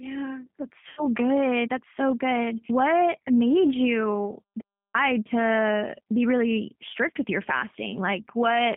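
Across the whole clip the speech sounds narrow, slightly rough and synthetic, with nothing above about 3.4 kHz and no deep low end below roughly 150 Hz. That is the G.729 codec at 8 kbit/s, plainly audible here. It rebuilds each 10 ms frame from a vocal tract filter, a pitch predictor and a handful of pulses rather than the actual waveform, so fine detail is lost and the sound takes on a rough, artificial edge.

Right after "yeah that's", from 0.89 to 1.08 s, the speech smears into a stretched buzzy tone or coloured noise that fades before normal sound resumes. This is VoIP packet loss concealed by the speech codec. About 80 ms of audio went missing, which fits four lost 20 ms packets. The decoder filled the hole by repeating its last pitch and filter settings at falling gain, and because each frame builds on the previous one, the voice stays weak or distorted just after the gap.

After "made you", from 4.61 to 4.94 s, the sound cuts to silence for about a third of a second, with no room tone at all, and then returns mid-flow on "to be really strict". 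This is an audio dropout to silence. The likely cause is that the input was briefly lost and the recorder kept writing silence, so whatever was said in those 330 ms is simply gone.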